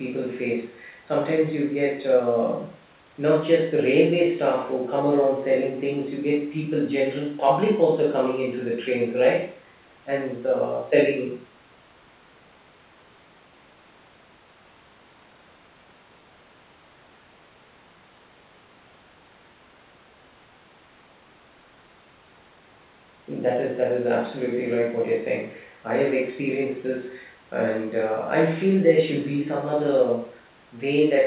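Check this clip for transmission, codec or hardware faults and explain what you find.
I find no transmission, codec or hardware faults in this clip.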